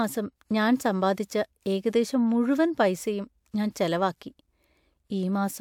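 No technical faults are audible.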